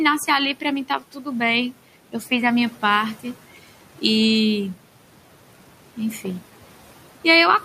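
A noise suppressor is at work across the whole recording, estimating the steady background and pulling down every band it judges to be noise, by about 12 dB, frame by frame. The room noise, which sat about 19 dB under the speech, therefore does not stay level: it drops away in the pauses and swells back up beneath the speech.

Between 0.88 and 1.27 s the same suppressor mistakes part of the speech for noise and turns it down along with the background, by about 10 dB at the deepest point. Only around a fifth of a second within that span is affected, so the effect is brief: quieter sounds and word endings there come across as swallowed or faint rather than fully missing.

From 6.25 to 6.32 s a sudden voltage step or pulse enters the signal, likely from a connector, switch, static discharge or driver glitch, and the downstream circuitry shapes it into a loud pop. Two pops arrive in quick succession, peaking about 10 dB above the program level, each a sharp click or thump laid over the speech, which continues underneath without interruption.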